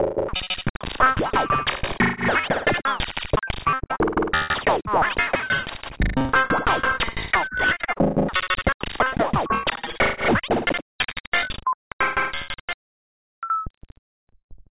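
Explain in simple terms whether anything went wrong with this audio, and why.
Nothing went wrong; no faults can be heard anywhere.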